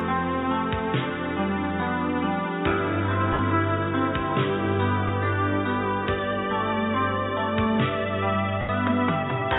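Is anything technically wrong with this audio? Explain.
Yes. The music briefly turns into a hissy, grainy smear that loses its tonal focus, from 3.33 to 3.39 s, at 5.08 s, and from 8.61 to 8.69 s, the last fading toward silence. These are lost LE Audio frames: the LC3 decoder covers the gaps by repeating the last spectrum with scrambled signs. The 60 ms and 80 ms gaps point to runs of several 10 ms frames, and the gap at 5.08 s to a single frame.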